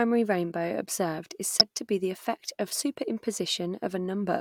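At 1.6 s, a short stretch of the compressed stream carries damaged data: some bytes in that region arrive wrong, lost, zeroed or overwritten, so the decoder cannot read the frames there properly. It loses sync and has to hunt forward for the next valid frame header before the speech resumes. The result is a brief chirp or blip, only about 16 ms long, cutting into the speech.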